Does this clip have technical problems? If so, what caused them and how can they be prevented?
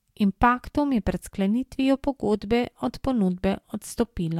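No, the speech signal arrives intact, with no dropouts, distortion or other technical faults to trace back to a cause or guard against.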